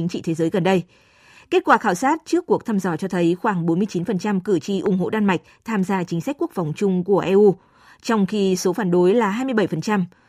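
A speech clip with a single loud pop from 4.86 to 4.88 s, a sharp click standing roughly 10 dB above the speech, while the talking continues uninterrupted underneath. On a waveform it appears as one narrow spike towards the clip's midpoint, far taller than the surrounding speech. A spectrogram shows a thin vertical stripe spanning the whole frequency range. The likely cause is a brief voltage step entering the signal path, such as a switch, static discharge or connector contact.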